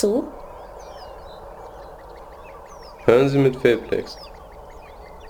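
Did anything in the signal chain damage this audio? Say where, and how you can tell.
Yes: crude rate conversion runs throughout, at the sample-rate conversion stage. A gritty, inharmonic fizz follows the loud and bright parts of the sound. The spacing of the dropped samples fits a 48 kHz to 44.1 kHz conversion with no anti-alias filter, leaving error about 30 dB below the signal.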